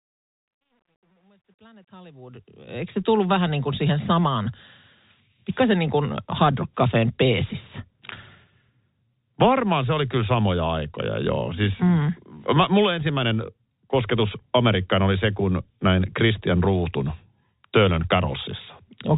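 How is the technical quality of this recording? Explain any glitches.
The recording has one clear glitch: truncation distortion on a fade, across the opening fade-in from 0.0 to 3.16 s, just before "vähän niin kuin siihen". From 0.0 to 2.28 s, the quietest part, the sound is gritty. The volume stage applying the fade kept too few bits and added no dither, which fits a 10-bit stage. At low gain the waveform is rounded into a handful of coarse square steps. It isn't the steady, level-following hiss of the telephone-band G.711 coding, and it isn't a gate chopping sound on and off. The grit sits only in the faint start of the fade and clears as the level rises.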